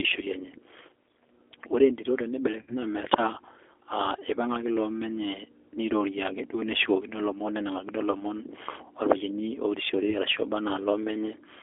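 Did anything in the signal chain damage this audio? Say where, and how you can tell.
Yes. At the codec stage, the whole clip passed through a G.729 codec at 8 kbit/s. Audio is confined to roughly 200 Hz to 3.4 kHz, and the sound has a plainly rough, synthetic texture. That comes from the decoder rebuilding each 10 ms frame from a filter, pitch predictor and a few pulses.

At the network stage, VoIP packet loss was concealed by the speech codec at 2.62–2.74 s after "ore entito", at 8.11–8.15 s after "loomon nenangakino", and at 10.1–10.2 s. The decoder stretched its last pitch and filter into a fading buzzy tone or coloured noise, and the sound stayed weak beyond each gap. The first dropout points to about 60 ms missing, the others to about 20 ms.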